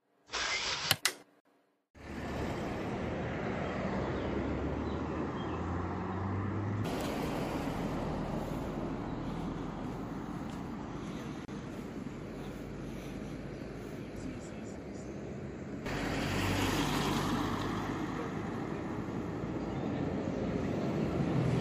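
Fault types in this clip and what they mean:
Gap at a join of encoded pieces: the audio drops out twice, around 1.40 s for about 49 ms and around 11.45 s for about 31 ms, ten seconds apart, which suggests separately encoded chunks stitched together untrimmed. Each chunk keeps its encoder's start-up silence and last-frame padding, so the continuous sound briefly vanishes, edges blurred by the codec so the true silence is shorter, then picks up exactly where it left off.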